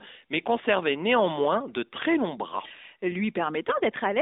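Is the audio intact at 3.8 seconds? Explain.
No, from 3.68 to 3.81 s there are AMR bit errors. Around a tenth of the less-protected bits flip, misplacing excitation pulses, so the speech turns hoarse and gargly.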